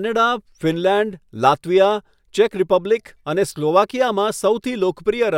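No technical faults can be heard at any point in this speech recording.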